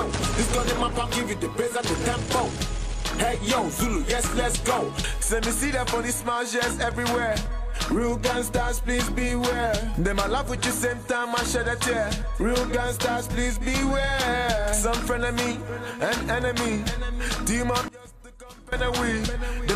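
From 17.88 to 18.72 s the sound collapses by about 20 dB into a faint residue. The likely cause is one channel inverted, so material common to both channels cancels in mono. Unlike a dropout, a faint remnant persists rather than silence.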